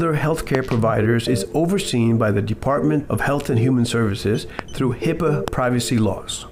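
Sharp loud pops jump out well above the sound, which carries on beneath them: a quick pair between 0.55 and 0.73 s, then single pops at 4.59–4.61 s and 5.48–5.50 s. Each is likely a sudden voltage pulse, from a switch, static or a driver glitch, added to the signal.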